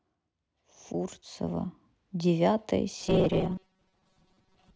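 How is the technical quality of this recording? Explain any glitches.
From 2.99 s to 4.76 s the speech collapses into a rigid, metallic buzz pitched at 188 Hz, still loosely tracking the syllables but no longer sounding human. This is robotic sound from repeated short buffers, likely caused by audio arriving too seldom, so the playback repeats the last stretch, about 5.3 ms, to fill each gap. Roughly half of the material is repeated rather than fresh, and that fixed repetition rate imposes the steady buzz.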